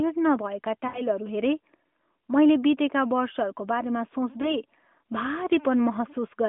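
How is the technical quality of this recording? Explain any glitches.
The sound comes through a narrowband mobile channel, limited to roughly 200 Hz to 3.5 kHz, which points to the AMR-NB codec at its 12.2 kbps mode. It has two dropouts from lost AMR speech frames. The first, from 0.88 to 1.02 s, lasts about 60 ms, which fits three consecutive lost 20 ms frames. The second, from 4.42 to 4.55 s, fits a single lost frame of about 20 ms. When a frame arrives corrupted, the decoder discards it and repeats the previous pitch and spectral settings at decreasing gain. That produces a short smeared, drawn-out stretch at 0.88 s that sags in level, and a brief dip or warble at 4.42 s, each followed by a moment of weak, rough recovery.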